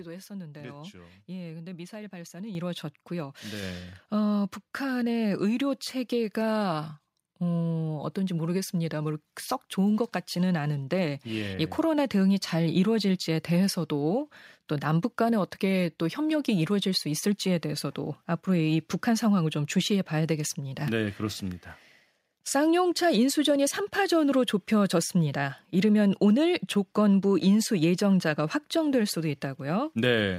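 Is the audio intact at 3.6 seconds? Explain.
No. At 3.63 s the microphone volume steps up: the call software judged the input too quiet and raised the device gain by about 3 dB at once. Voice and background noise jump together and stay louder, unlike a talker moving closer, where only the voice rises.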